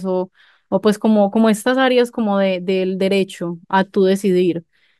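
Nothing here needs flagging, as no technical faults turn up anywhere in this recording.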